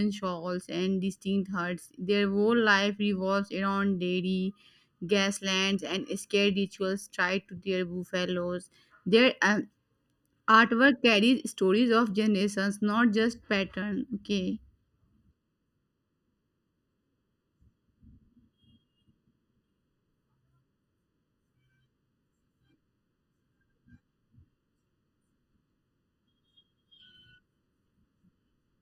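From start to finish the speech shows channel delay (comb filtering). One channel trails the other by under a millisecond, and summing them to mono cancels shared content at evenly spaced frequencies, the first notch near 700 Hz. The result sounds hollow and phasey.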